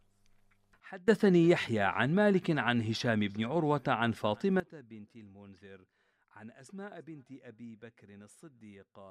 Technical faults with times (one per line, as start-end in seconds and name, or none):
0.80-1.08 sudden gain jump
4.60-9.11 sudden gain jump